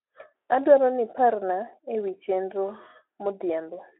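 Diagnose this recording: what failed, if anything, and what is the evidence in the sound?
Nothing has failed: the speech sits in a telephone band of 300 Hz to 3.4 kHz with nothing above 3.8 kHz, which fits a narrowband Speex path at around 15 kbps, and the light codec roughness is what that path normally leaves.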